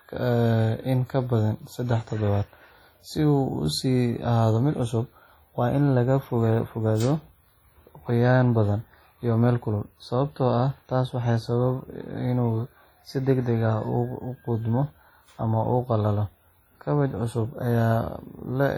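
A speech clip with heavy WMA compression damage throughout, likely from an early WMA encoder at a low bitrate near 32 kbps. Each sound carries a ringing, washy smear, and a hiss swells and fades with the signal as quantisation noise spreads over long transform blocks. On a spectrogram, weak harmonics vanish into patchy gaps and transients blur sideways in time, with nothing above 19.9 kHz. The waveform shows noise spreading around onsets.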